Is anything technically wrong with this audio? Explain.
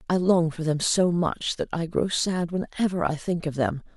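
No, nothing technically wrong turns up in this speech recording on listening.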